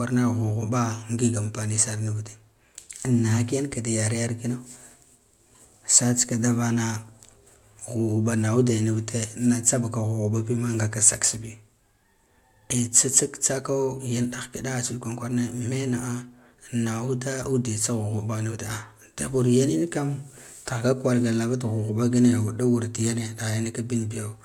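A speech recording with no technical faults anywhere in the signal.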